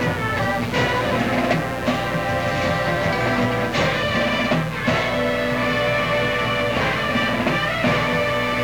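A steady, raspy mains buzz runs under the sound from start to finish, sitting about 10 dB below the signal. Sharp switching spikes, twice per cycle of a 60 Hz supply, have leaked in, spraying harmonics of 60 Hz up into the kilohertz range.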